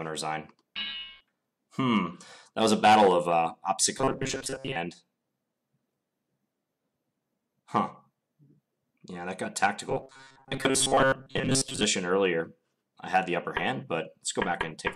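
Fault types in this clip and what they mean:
Robotic sound from repeated short buffers: two stretches, 3.98 to 4.76 s and 9.89 to 11.84 s, become a rigid, metallic buzz held at 134 Hz. The likely cause is new audio arriving too seldom, so playback keeps looping the latest fragment while fresh material is skipped. A 134 Hz buzz points to a fragment of about 7.5 ms. Roughly two thirds or more of each stretch is repeated material rather than real audio.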